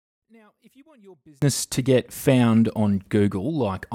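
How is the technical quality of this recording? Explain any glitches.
The recording has one clear fault, confined to its opening. One channel inverted is the likely cause of the problem from 0.0 to 1.42 s, just before "to get found". When one stereo channel's polarity is flipped, everything the two channels share cancels once they are summed to mono, and centred speech shares nearly everything. The speech drops by about 36 dB, leaving only a faint residue of the small differences between channels until full level returns.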